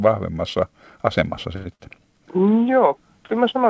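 At about 1.56 s there's a short stall from a late packet. The jitter buffer ran dry, so the receiver held the last sound for roughly 94 ms until the packet turned up at 1.67 s. Nothing is lost, but that sound drags a little and everything after it lands about 94 ms later.

Right after, from 1.75 to 1.81 s, comes a short concealed packet loss. About 40 ms of audio never made it, and the decoder papered over the gap by extending what came before, so you get a quick smear before it blends back in. The call path itself caps everything at 8 kHz, which fits a G.722 link at 64 kbps.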